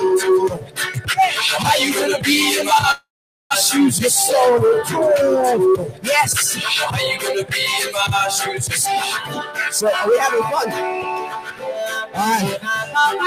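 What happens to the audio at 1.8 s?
At 1.8 s a noise suppressor applied to music or sounds is at work, as throughout: steady tones and tails get pushed down around 10 dB, pumping the waveform envelope and thinning the spectrogram between attacks.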